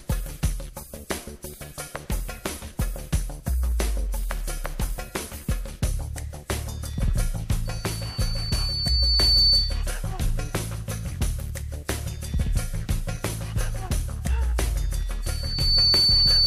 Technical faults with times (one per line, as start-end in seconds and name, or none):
7.65-9.86 loudspeaker feedback squeal
15.23-16.46 loudspeaker feedback squeal